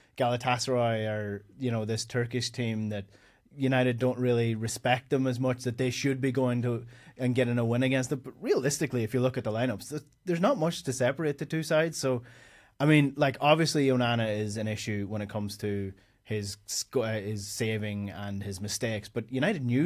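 No technical faults can be heard anywhere in the recording.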